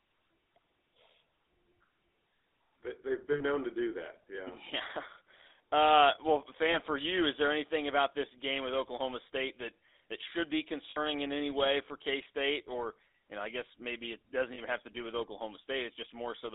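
Throughout, the GSM full-rate codec gives the speech a buzzy, gravelly roughness within a 300 Hz to 3.7 kHz band. That roughness sets it apart from simple telephone band-limiting.

Lost GSM frames appear at 3.32–3.43 s before "known to do that", at 6.72–6.76 s before "for you is there", and at 10.9–10.98 s. At 14.54–14.6 s they fall between "guess maybe it doesn't" and "have to do with". Each is held as a metallic ring rather than a silent dropout.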